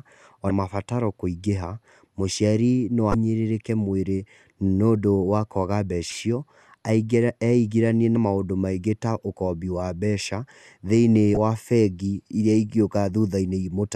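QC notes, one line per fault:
0.47–11.37 s, damaged data in a compressed stream: five short blips in this speech, each about 30 ms long: 0.47–0.51 s (just before "mabataro kũingĩha mũciari no"), 3.11–3.15 s, 6.09–6.12 s, 8.13–8.16 s (just before "maũndũ maingi") and 11.34–11.37 s (just after "wa mbeca thĩinĩ"). Corrupted bytes make the decoder misread those frames and lose sync. It outputs a brief glitch and then resumes at the next valid frame header.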